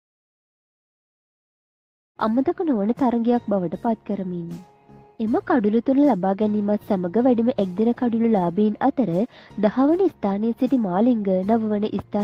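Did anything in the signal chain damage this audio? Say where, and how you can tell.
No, nothing damaged it.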